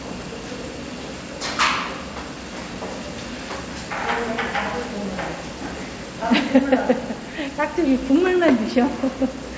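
No technical faults can be heard here; the sound simply stops at 8 kHz, which fits a wideband call codec such as G.722 after normal call microphone processing.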